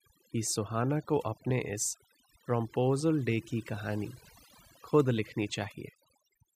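A speech recording in which, from start to finish, pauses fall to near silence dotted with twinkling specks. That is overdone noise removal: a noise reducer set too hard cuts individual frequency bands near its noise estimate, taking quieter voice detail with them.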